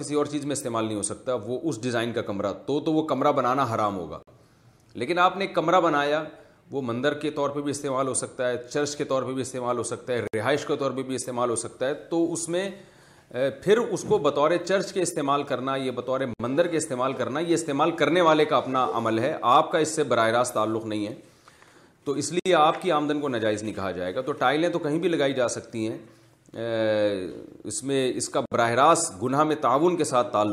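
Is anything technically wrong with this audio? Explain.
Yes. Gaps at joins of encoded pieces occur at 4.23, 10.27, 16.34, 22.40 and 28.46 s, every 6 s. Separately encoded pieces were joined with their encoder start delay and end padding left in, so the sound drops out for 49 ms at the first join and 60 ms at the rest, with smeared edges, then resumes where it stopped.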